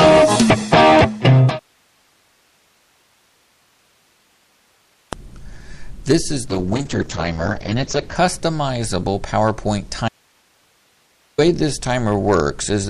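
At 6.5 s a call bitrate drop begins. The top end is cut off at 8 kHz, and the sound turns rough and watery. It stays at its worst for about 1.6 s, which points to the encoder falling from around 48 kbps to 8 kbps. Quality recovers by 8.21 s.

From 10.09 s to 11.38 s there is an audio dropout to a faint residue. The sound cuts out abruptly for about 1.3 s. Only hiss remains, roughly 40 dB below the signal. The likely cause is a lost input with the path after it still live.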